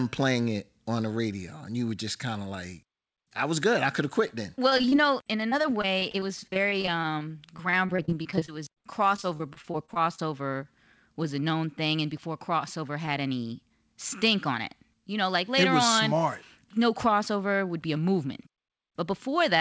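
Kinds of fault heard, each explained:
Short concealed packet loss: a twenty-millisecond hole got patched by stretching the last sound, giving a brief smear after "good I could have" and again after "thing and before crossover".
Repeated packet loss (robotic sound): packets kept dropping from about 4.7 to 8.8 s and 9.2 to 10.2 s, so constant patching turns it choppy.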